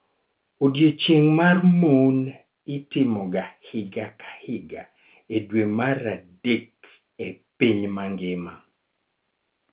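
Nothing goes wrong anywhere in this speech recording; the narrow telephone sound, with nothing above 4 kHz and a faint grain that rises and falls with the level, is simply ordinary G.711 mu-law coding at 8 kHz.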